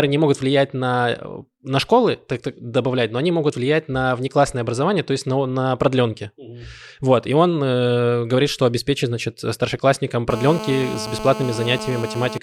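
A steady, raspy buzz at 217 Hz, about 10 dB below the speech, runs from 10.30 to 12.38 s after "что обеспечит значит старшеклассникам": GSM phone buzz, a nearby 2G phone's call bursts rectified in the audio circuit.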